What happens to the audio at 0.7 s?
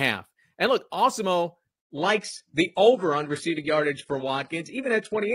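Nothing goes wrong at 0.7 s; the speech plays through that moment intact, with no dropout, click or distortion.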